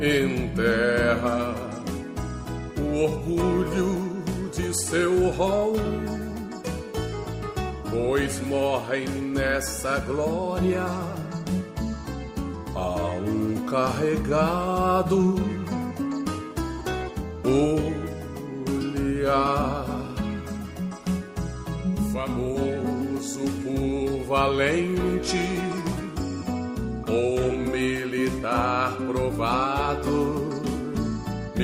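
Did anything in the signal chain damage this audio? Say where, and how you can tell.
No, no chain damage heard.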